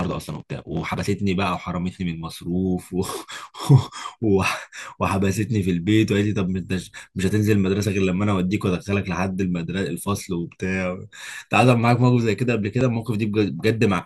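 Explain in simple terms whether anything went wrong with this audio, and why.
At 12.81 s the speech has a brief jump where a few milliseconds of audio are skipped and the two sides are joined with no gap. This is likely a dropped buffer (overrun): the recording software fell behind, and the hardware overwrote that slice before it was saved.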